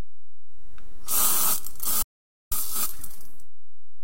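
A DC offset runs through the whole clip: the waveform sits shifted away from zero by a constant amount. Unlike mains hum or rumble, it has no pitch and cannot be heard directly; it shows only as steady energy at the very bottom of the spectrum and uses up headroom.

At 2.03 s the audio cuts out mid-flow and returns at 2.51 s, an audio dropout to silence lasting about 0.49 s. The likely cause is lost input, such as a disconnected device, a failed link or a stray mute, while recording carried on. What sets it apart from a quiet passage or a fade is that the gap holds no room tone at all, and the sound in that stretch is simply gone.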